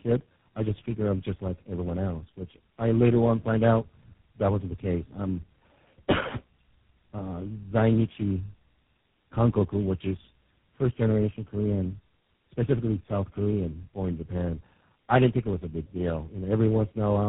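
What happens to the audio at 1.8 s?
At 1.8 s the speech carries tandem speech coding, which runs through the whole clip rather than starting there. The sound has passed through several low-rate speech coders in a row, which fits a chain of four such codecs like AMR-NB, G.726 and GSM full rate joined by G.711 links. Each coder re-quantises the previous one's errors, so the speech sounds rough, muffled and warbly. On a spectrogram, energy stops at a hard ceiling near 3.8 kHz and the harmonics look smeared and blotchy.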